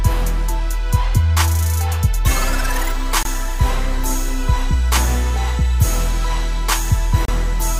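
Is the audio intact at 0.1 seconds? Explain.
Yes, at 0.1 seconds the audio is intact, with no fault audible at that moment.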